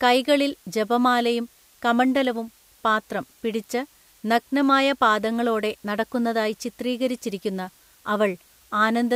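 From start to finish the speech carries low bit depth with dither: the samples have been rounded to about 9 bits, with dither added first so the rounding error turns into steady white noise rather than distortion. The result is a constant, even hiss, roughly 35 dB below the speech, that never changes with level. On a spectrogram it shows as a flat, uniform haze across all frequencies, filling the pauses; the waveform never falls to a clean zero line.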